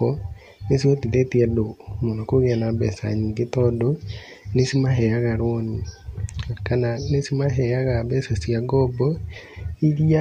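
No technical faults can be heard anywhere in this speech recording.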